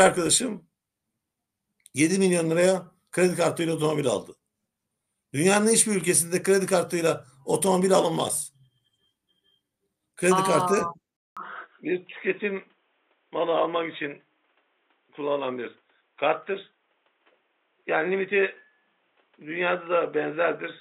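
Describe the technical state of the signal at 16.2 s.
At 16.2 s you're inside a stretch that runs from 11.17 s to the end, where the sound goes dull and boxy with nothing above 3.8 kHz, drops a few dB in level and sits on a new noise floor roughly 40 dB down. There's a 200 ms gap right at 11.17 s where it changes over. That all points to the input likely being switched to a poorer device mid-recording, one with a narrower band and its own noise.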